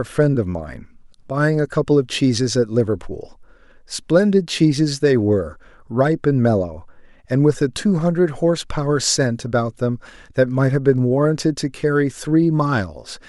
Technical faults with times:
none

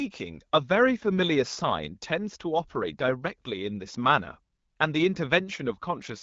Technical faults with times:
none

